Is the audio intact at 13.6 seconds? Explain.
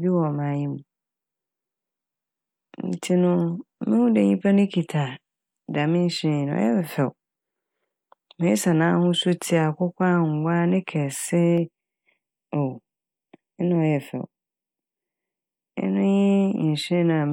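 No, channel delay (comb filtering) runs from 11.58 to 15.78 s. One channel lags by about 0.4 ms and sums to mono, giving fixed hollow notches from around 1.5 kHz, unlike a sweeping flanger.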